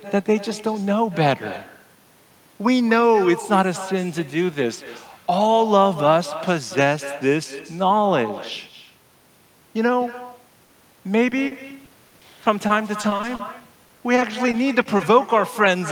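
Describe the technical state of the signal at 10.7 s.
Short concealed packet loss runs from 10.65 to 10.71 s: about 40 ms of the call went missing, and the receiver filled it by extending the preceding sound, producing a brief smear rather than a silent gap. Underneath, the echo with no canceller persists: a copy about 15 dB quieter returns roughly a fifth of a second later, a distinct delayed repeat rather than a smooth reverberant tail.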